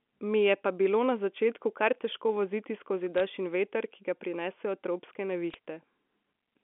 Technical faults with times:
3.18-3.20 bit errors on a digital phone line
5.50-5.54 bit errors on a digital phone line

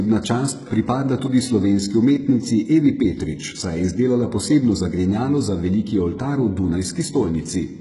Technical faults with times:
0.00-7.81 HE-AAC compression

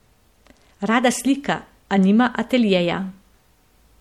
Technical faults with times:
0.00-4.00 MP3 compression

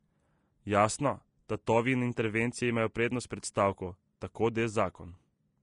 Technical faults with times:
0.00-5.62 Vorbis compression

